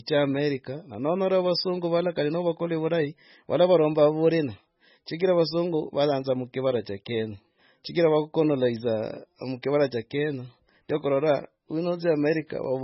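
Throughout the speech, nothing is heard above 5.6 kHz. The sound is watery and swirly, with metallic chirps on s sounds and smeared attacks. This is likely MP3 compression starved of bits, fitting a very low bitrate near 16 kbps.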